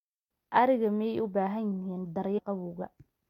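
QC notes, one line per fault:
2.37–2.39 s, damaged data in a compressed stream: corrupted bytes make the decoder misread frames and lose sync, giving a brief glitch in the speech.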